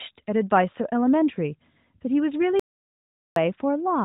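At 2.60 s the speech cuts off abruptly into dead digital silence, with no room tone, and resumes at 3.36 s, so about 0.77 s is simply missing. This audio dropout to silence most likely comes from the input briefly disconnecting or muting while silence kept being written. Through it all, the narrow mobile band stops at about 3.8 kHz, consistent with AMR narrowband at its 12.2 kbps mode.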